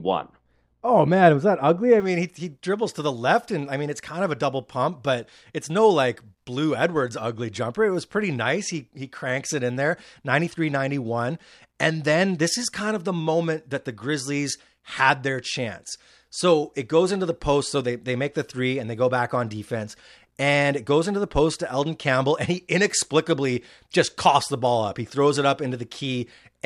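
De-emphasis applied wrongly affects the opening two seconds, from 0.0 to 2.0 s. A treble-cutting filter meant to reverse pre-emphasis has been applied to speech that never had that boost, or has been applied a second time. The result is a smooth downward tilt across the upper spectrum, leaving 10 kHz about 11 dB below 1 kHz. Consonants lose their crispness and the speech sounds dull and muffled, as if heard through a cloth.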